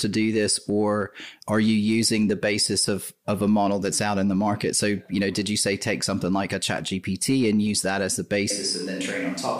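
At 8.51 s the speech turns abruptly roomy and hollow, loses low end, and stays that way to the end. This is a switch to a distant microphone, likely after the close microphone's feed dropped out. Level falls by roughly 5 dB, and room noise sits about 30 dB below the speech.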